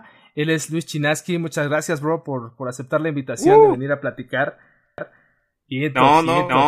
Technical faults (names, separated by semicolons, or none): doubled audio track